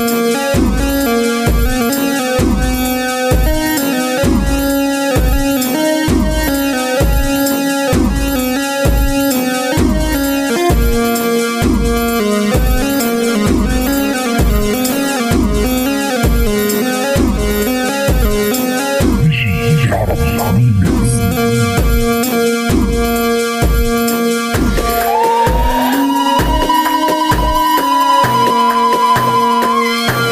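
From 12.94 s to about 15.25 s there is a call bitrate drop: the connection's bandwidth estimate collapsed and the encoder was forced to spend far fewer bits, which fits a fall from around 96 kbps to roughly 23 kbps, held at its lowest for about 2.25 s. The sound turns coarse and watery, with the top end shaved off, then recovers. Unlike packet loss, nothing drops out or stutters; the degradation is continuous until the rate comes back.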